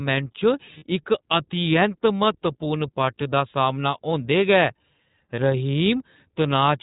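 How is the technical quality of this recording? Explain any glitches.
Technical quality is limited by a low-rate voice codec, with three brief dropouts.

iLBC codec, throughout: speech is band-limited to 4 kHz and sounds slightly rough and synthetic, which fits iLBC's 15.2 kbps mode with 20 ms frames.

Lost iLBC frames, at 0.78–0.84 s (about 40 ms), 2.64–2.66 s and 5.36–5.39 s: the decoder repeats the last pitch cycle with noise, giving a short buzzy held vowel, then recovers immediately.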